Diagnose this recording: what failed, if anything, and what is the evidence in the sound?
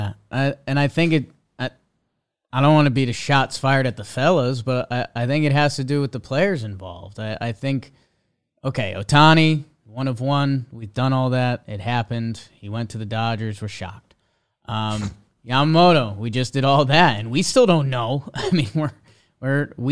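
Nothing in the chain from capture to playback has failed, and the speech signal carries no audible technical defect at any stage.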